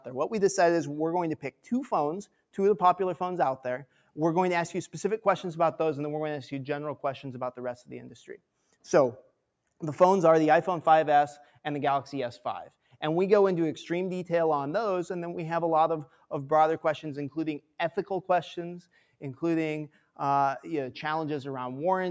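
Around 16.07 to 16.31 s there's a stretch of sound cut by the noise suppressor. The noise suppressor misjudged that bit of sound as background noise and pulled it down harder than its surroundings, by about 9 dB at the deepest point. The call's microphone processing, whose band stops at 8 kHz, is working normally. Across roughly a fifth of a second, you hear the level sink and then come back up.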